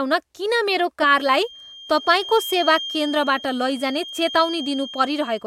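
From 1.09 s to the end of the speech, a feedback whistle sits under the signal: a thin, steady tone near 3.2 kHz, around 15 dB below the speech, slowly swelling and fading in level. A loudspeaker-to-microphone loop held just at the edge of feedback is the likely cause.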